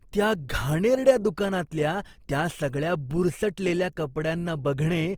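From start to end, the speech carries Opus compression damage. It is plainly audible. Band energies are kept, but starved bands are filled by folding or noise. Tones sound grainy and rough. The fullband music mode at about 24 kbps is the likely cause.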